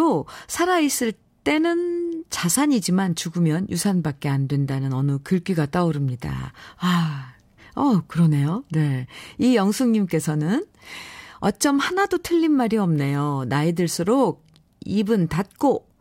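Nothing stood out as a technical fault anywhere in the speech on listening.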